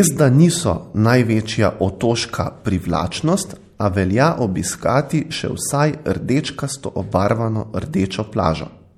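Speech with a watery, swirly texture throughout, likely from MP3 compression, whose clearly audible damage fits a bitrate around 64 kbps.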